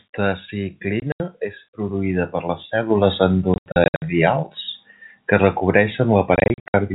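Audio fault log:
1.0–1.2 s, 3.54–4.02 s and 6.36–6.74 s, packet loss filled with silence: the speech is punched with holes, about 100, 280 and 240 ms lost in total, with no gap longer than 80 ms. The gaps come in steps that fit 20 ms packets. The receiver played digital silence in their place, so the waveform drops to silence with sheer edges. On a spectrogram these show as blank vertical slots with thin broadband lines at each edge, all within the narrow band of the G.711 telephone coding.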